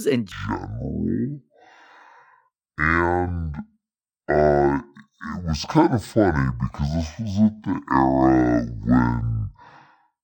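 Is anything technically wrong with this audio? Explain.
Yes. From about 0.32 s right through to the end, this speech has been hit by stereo read as mono. The file's left and right samples alternate, and something has taken that interleaved stream as one channel, so every pair of samples gets played back to back. That stretches time to 0.5x speed and drops the pitch a full octave, 12 semitones, giving that slow, deep, dragging quality. You'll also catch a fainter mirrored copy sitting up in the top half of the spectrum.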